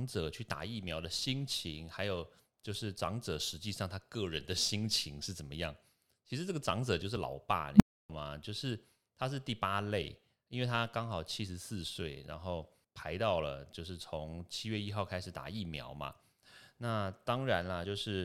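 Damaged data in the compressed stream at 7.15 s: corrupted bytes throw the decoder out of sync, producing a brief glitch.

An unstable filter at 7.74 to 8.10 s: a recursive filter with bad coefficients runs away, so a low tone around 200 Hz swells within about 54 ms to clipping, then overflows into roughly 0.3 s of silence.

The same damaged compressed data returns at 17.84 s as another short blip while the decoder hunts for its next valid frame.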